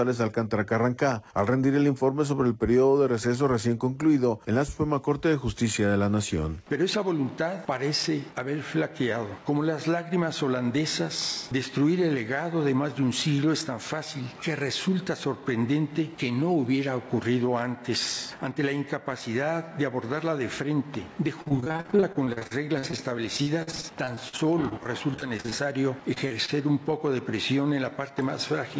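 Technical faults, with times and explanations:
21.42–22.99 s and 23.37–25.53 s, repeated packet loss (robotic sound): audio drops out in many short bursts, gaps up to 43 ms, and each hole is bridged by stretching the last sound. Roughly a third, then a fifth, of each stretch is synthetic, giving choppy output with pieces missing.
26.13–26.18 s, 26.28–26.32 s and 26.46–26.50 s, short concealed packet loss: three brief holes, each fitting one lost 20 ms packet, are patched by extending the preceding sound and blending back, heard as quick smears or wobbles within the G.722 call audio, which stops at 8 kHz.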